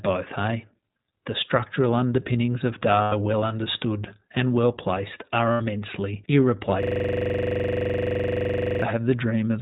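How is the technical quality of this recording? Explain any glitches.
The technical quality is poor, with three distinct problems.

Throughout, the speech sounds narrow and slightly rough and synthetic, with nothing above 4 kHz. This is the iLBC codec, a narrowband VoIP coder that codes each 20 ms frame on its own. The damage fits its 15.2 kbps mode and is plainly audible.

At 3.02 to 3.14 s and again at 5.52 to 5.62 s, the voice turns into a brief held, buzzy vowel before snapping back to normal. These are lost iLBC frames. The gaps last about 100 ms and 80 ms, which fits five and four lost 20 ms frames. For each gap, the decoder repeated the last pitch cycle mixed with noise. Because iLBC frames stand alone, it recovered almost immediately.

From 6.83 to 8.82 s, one 42.67 ms slice of audio repeats 47 times. This produces a rough buzz or rapid stutter at about 23.4 Hz. It is a system hang loop: the computer or driver froze while the sound hardware kept cycling through the same ring buffer, which fits a 2048-sample buffer.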